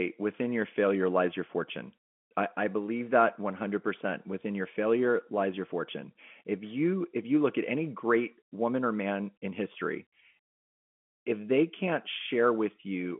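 No faults are present; the speech runs over an ordinary G.711 telephone path, so everything sits inside the 200 Hz to 3.4 kHz line band, with nothing above it.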